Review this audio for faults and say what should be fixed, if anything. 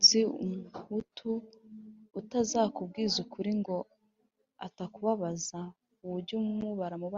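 No faults found; nothing needs fixing.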